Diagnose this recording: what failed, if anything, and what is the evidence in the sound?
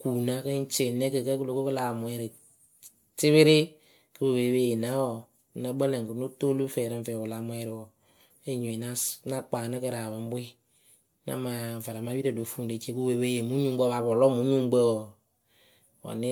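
At the codec stage, the speech sounds swirly, smeared and hollow throughout, with blurred attacks, more than a single MP3 pass near 128 kbit/s would give. On a spectrogram, holes spread through the upper bands and stop at 20 kHz; waveform onsets look softened. Likely generation loss, from repeated MP3 re-encoding, perhaps about five passes, each re-quantising on a shifted frame grid.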